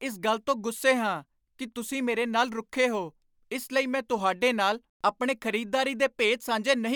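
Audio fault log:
No technical faults are audible anywhere in the speech recording, and the signal holds steady and continuous throughout.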